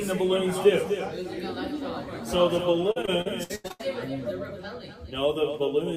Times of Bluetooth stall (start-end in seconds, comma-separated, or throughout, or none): none